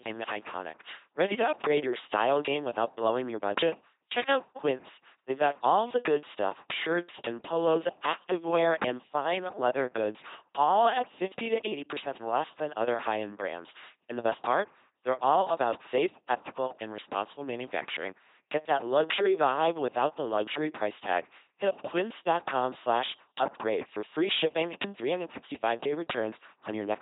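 From start to finish the speech passes through an LPC-10 vocoder. In place of the waveform, it sends a coarse filter shape for the vocal tract plus a voiced-or-unvoiced decision, and drives that filter with either a pulse train or noise. The heavy damage fits a 2.4 kbit/s stream. The result is a buzzy, mechanical robot voice, with stray buzz or hiss wherever the voicing call goes wrong, and nothing above 3.8 kHz.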